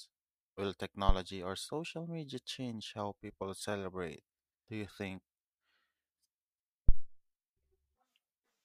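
Phantom power thumps hit this speech recording twice: at 1.09 to 1.16 s, just before "or social media change", peaking at about −13 dBFS and dying away in 16 ms, and at 6.89 to 7.10 s, peaking at about −10 dBFS with a 47 ms decay. Each is a deep, low thud. A supply voltage was switched on or off on the live input, and that sudden DC step pushed through the coupling capacitors as a brief low-frequency pulse.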